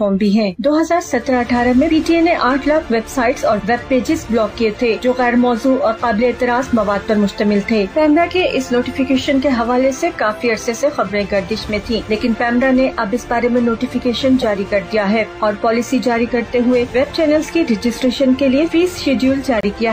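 Short blips at 2.51 s, 4.50 s and 9.57 s, then at 11.08 to 11.11 s and 14.41 to 14.44 s, are corrupt frames being decoded: damaged bits were played as if valid, so misread gains and codes put energy at the wrong frequencies for one frame each. The 14.4 s blip is the loudest, near -10 dBFS. A longer burst from 19.58 to 19.65 s spans several consecutive frames and sounds like a brief squeak of noise.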